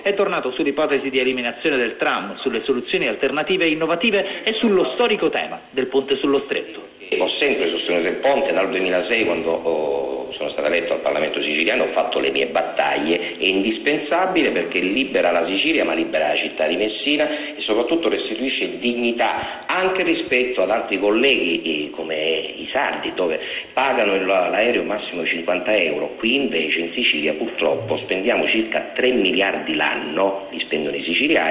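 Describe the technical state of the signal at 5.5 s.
At 5.5 s the signal is intact, with no dropout, glitch or distortion, only the narrow telephone-band sound of the call path, which carries nothing above 4 kHz.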